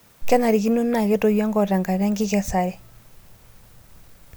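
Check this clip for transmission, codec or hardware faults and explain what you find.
I found no transmission, codec or hardware faults in this clip.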